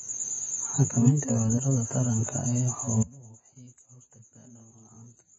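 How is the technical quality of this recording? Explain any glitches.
The recording has poor technical quality: codec damage runs throughout, and the sound collapses in its final stretch.

Throughout, the speech is dull and smeared with nothing above 7.6 kHz, heavy damage that likely comes from AAC compression. Its warbling texture, not a clean roll-off, sets it apart from simple low-pass filtering.

From 3.03 s to the end, the level drops by about 24 dB, leaving a faint copy. The likely cause is one channel inverted, cancelling common content when summed to mono. Unlike a dropout, a residue remains audible.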